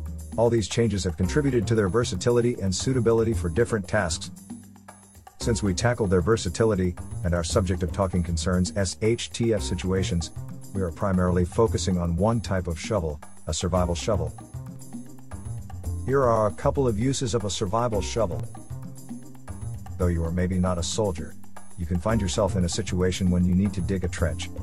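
At 14.76 s a DC step shifts the waveform's zero line and holds it offset to the end, heard as one low thump, visible as a sudden baseline jump. At 18.40 s a short skip joins seamlessly, likely audio missing between chunks, roughly 15 ms lost at a 10 s boundary, showing as a spectrogram discontinuity.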